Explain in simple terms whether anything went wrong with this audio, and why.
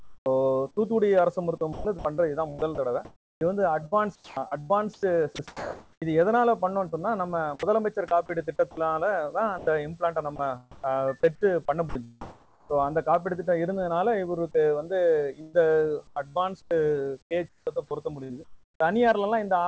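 Several things went wrong, likely caused by the sender's voice detector switching the audio on and off.

Comfort noise in place of the background: for the first 0.26 seconds, the real background is replaced by a quieter, flat, artificial hiss.

Onset clipped by the voice detector: at 0.23 to 0.26 seconds, the beginning of a sound is missing. It starts abruptly, without its soft lead-in.

Sound chopped by the voice detector: from 1.58 to 6.02, 6.89 to 7.71, 9.58 to 12.82 and 15.41 to 18.80 seconds, bits of sound drop out.

Sound dropped by the voice detector: at 8.71 to 8.77 seconds, a short piece of sound disappears into steady noise, then returns.

The call path removes everything above 8 kHz, so the sound lacks its highest frequencies.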